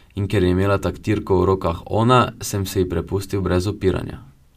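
Nothing in the speech here points to a technical fault; there's simply nothing to flag.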